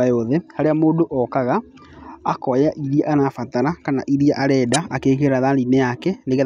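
A corrupt frame decoded runs from 4.74 to 4.78 s, right after "kana iria". Flipped bits in about three consecutive compressed frames were not caught, so the decoder rebuilt them from garbled gain values and spectral codes and placed energy at frequencies the speech never held. The result is a short chirp or burst of noise lasting roughly 50 ms, peaking around -5 dBFS.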